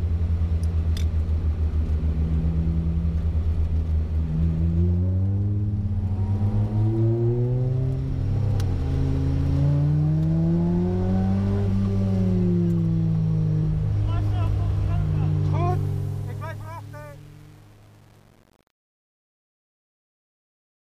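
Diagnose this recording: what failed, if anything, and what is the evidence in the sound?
The failure sits in a sample-format conversion or digital gain stage: truncation distortion on the fade-out. From about 15.7 s the level falls toward 20.8 s, but from 15.70 s the tail turns gritty, and from 15.99 s to the end it is at its worst. The fade was requantised without dither, which fits a word of about 7 bits. Low-level samples snap to coarse square steps. A gate would cut cleanly, and codec artefacts would swirl rather than rasp.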